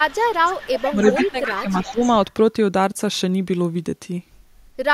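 From 0.08 to 1.46 s, a delayed copy of the speech trails the original by 322 ms. It sits roughly 10 dB below the direct voice. This is an echo leak. A far-end loudspeaker was likely picked up by its own microphone, and the echo canceller failed to remove it.

Within that stretch, at 0.92 to 0.98 s, the speech dips briefly by a few decibels. From 1.3 to 1.69 s it drops harder, by around 10 dB, for roughly a third of a second. This is speech suppressed in double talk. The canceller likely mistook overlapping talk for echo and turned everything down.

A second echo leak runs from 1.82 to 2.15 s. The same 322 ms repeat returns, fainter, about 15 dB down. Inside it, from 1.91 to 2.01 s, the speech is suppressed again. It sinks by about 15 dB for a tenth of a second.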